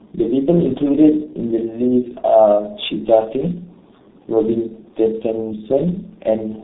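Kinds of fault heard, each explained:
Tandem speech coding: throughout, two low-rate speech coders in a row each re-encode the last one's damage, leaving rough, warbly speech with nothing above 3.8 kHz.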